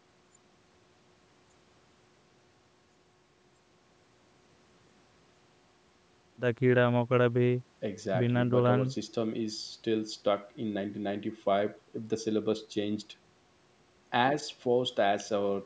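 Nothing here counts as a fault; the speech simply carries the usual marks of call microphone processing, with the lowest bass trimmed away and nothing above 8 kHz, which is just how that path normally sounds.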